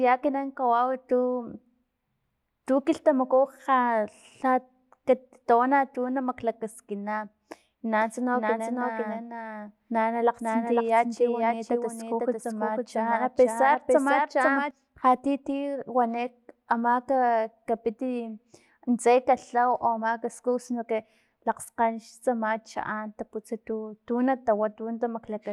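From 8.01 s to 14.71 s the speech carries a doubled audio track: a second, full-band copy runs about half a second behind the original, roughly 5 dB quieter, with no reverberant tail or room colouring. It cuts in and drops out abruptly, starting just before "lha ti ti wani". The likely cause is the signal being captured twice, once through a slower path, so both copies sum out of step.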